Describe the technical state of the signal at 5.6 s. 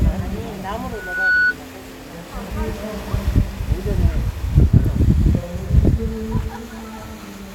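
At 5.6 s the signal is intact, with no audible fault at that point.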